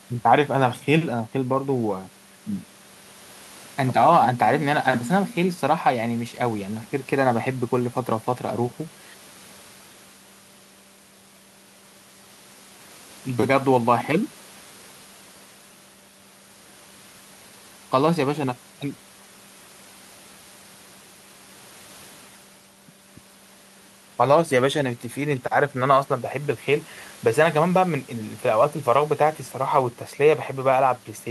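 A speech recording with nothing technically wrong with it.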